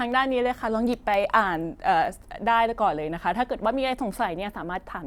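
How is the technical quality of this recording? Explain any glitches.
The recording has one recurring glitch: periodic USB or driver dropouts from 0.12 s to 4.2 s. About every 1.02 s, five times or so, something in the system briefly blocked the USB link or audio driver, and the interface lost a tiny sliver of audio, well under a millisecond, which was filled with silence. Each gap cuts into the speech waveform and produces an evenly spaced tick that is audible only while the speech is present.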